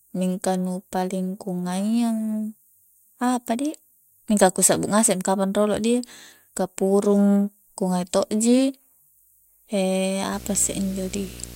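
From 10.33 s to the end at 11.56 s, a video or display buzz appears: a 60 Hz field-rate buzz with hash, roughly 20 dB below the speech, coupled from screen or cable.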